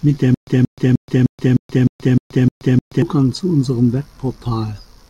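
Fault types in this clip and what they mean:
Stutter with silent gaps: from 0.34 to 3.02 s, a 178 ms fragment repeats every 306 ms with 127 ms of digital silence between, likely a stalled stream replaying its last chunk. Identical waveform blocks and spectrogram slices alternate with flat, blank gaps.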